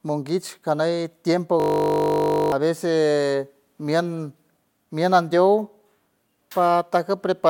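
Speech with a system hang loop from 1.6 to 2.52 s. A frozen driver left one 20 ms buffer cycling, giving a steady 50 Hz buzz, not silence, and losing about a second.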